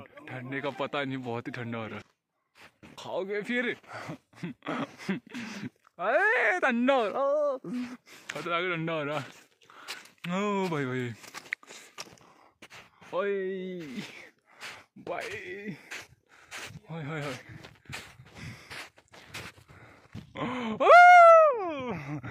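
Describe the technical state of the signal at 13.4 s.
At 13.4 s the signal is intact, with no dropout, distortion, clipping or other fault audible at that point.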